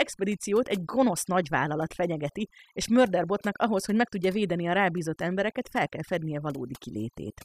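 A speech recording with overdone noise removal running the whole way through. The denoiser's been pushed too hard, so any frequency band sitting close to its noise estimate gets clamped down or switched off, and the quieter bits of the voice get caught along with the noise. That's why the background in the gaps drops away and breaks up into little twinkly specks.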